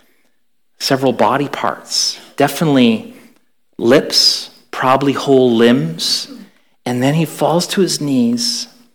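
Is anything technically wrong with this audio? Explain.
Yes, there is hard clipping at 0.92 to 1.69 s, 4.86 to 4.96 s and 5.32 to 5.72 s. The speech level overran a stage's maximum by about 6, 7 and 4 dB, flattening the peaks. The flat tops add high harmonics, heard as crackly fuzz on loud syllables.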